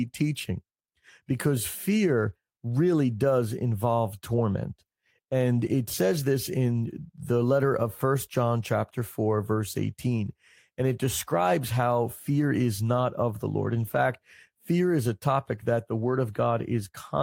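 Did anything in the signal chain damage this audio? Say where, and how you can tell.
No, nothing along the way seems to have harmed this recording; I can't hear anything the chain did to it.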